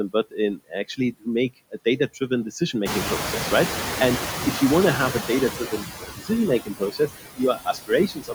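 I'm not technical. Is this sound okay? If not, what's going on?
No. Three problems come from the noise suppressor, the part that tries to remove background hiss.

The first is noise suppressor artifacts, and they run through the whole clip. The suppressor lowers the background again and again. So the noise dips in the pauses and comes back under the talking. What remains can flutter or warble. The voice can sound thin or watery.

The second is speech cut by the noise suppressor. Sometimes the suppressor mistakes parts of the speech for noise and turns them down too. This happens at about 0.57 to 0.99 s, 1.71 to 2.31 s, 5.59 to 6.31 s, 6.59 to 7.4 s, 7.56 to 7.91 s and 8.08 s to the end. The first two are brief. The later ones are longer and deeper. Soft sounds and word endings seem swallowed or faint there.

The third is the noise suppressor catching up. Around 3 s the room noise jumps up sharply. 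That noise is genuinely there in the room. The suppressor is slow to react. From 2.85 to 5.47 s, about 2.6 seconds, more of the noise gets through at first. Then it slowly fades as the suppressor adjusts.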